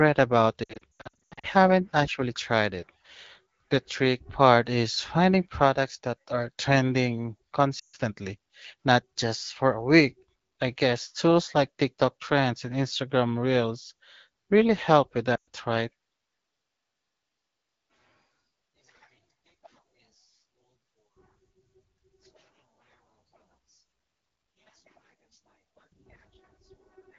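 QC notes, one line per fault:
0.63 to 1.46 s, lost AMR speech frames: scattered dropouts over about 0.8 s, runs no longer than 80 ms, so the decoder keeps reusing the last good pitch and vocal tract settings. You hear a choppy warble just before "actually tried it".
7.79 to 7.96 s, lost AMR speech frames: a 140 ms hole after "products that are trending". The sound smears, fades fast, then comes back weak.
15.36 to 15.47 s, lost AMR speech frames: the same smear-and-fade over 120 ms after "really help with".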